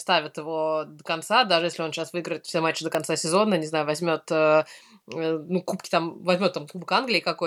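At 2.95 s, right after "выиграет все матчи до" and before "сезона не знаю", a sharp snap sits on top of the speech. It's an electrical switching spike, likely a nearby switch, motor or static discharge arcing briefly and getting picked up on the audio line.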